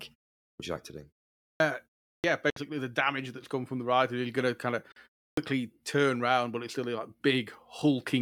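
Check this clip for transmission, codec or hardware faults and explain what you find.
Two faults recur: clipped starts after pauses and brief mid-sound gaps.

Clipped start after a pause at 0.52, 1.53 (after "you like to do"), 2.16 and 5.3 s (before "turn round but it's"). After silences of 0.3 to 0.5 s, the output device wakes late and swallows about 70 to 80 ms of each onset. The sound bursts in abruptly.

Gaps at 2.50 s (61 ms) and 4.92 s (41 ms, after "going to kind of") are likely a Bluetooth dropout. Late packets leave sharp holes inside continuing sound, not at onsets, and the sound then resumes as if it had played on.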